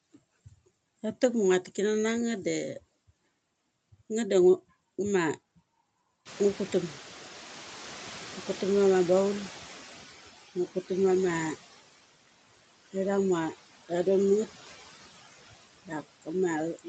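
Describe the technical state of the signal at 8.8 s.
At 8.8 s the noise suppressor is catching up. This runs from 6.25 to 10.13 s, after the room noise jumped by about 24 dB around 6.5 s. The suppressor's noise estimate lags behind that jump, so the noise comes through with only about 11 dB of reduction and sinks gradually as the estimate adapts. That slow sinking over nearly 4 seconds is what sets it apart from a sudden gate.

Noise suppressor artifacts are also present here, as they are throughout the clip. The suppressor takes about 14 dB off the noise, frame by frame, so the leftover noise dips between words and rises beneath them.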